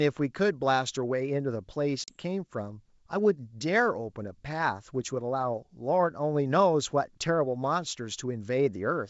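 Packet loss on an ADPCM call occurs from 2.04 to 2.15 s, where about 40 ms of the speech, roughly a couple of packets, drops out into a hard-edged silent gap. Because the decoder's adaptive predictor and step size lose track of the sender's during the gap, the speech comes back with some distortion until it recovers by about 2.15 s. The G.722 wideband coding at 64 kbit/s itself leaves faint or no trace.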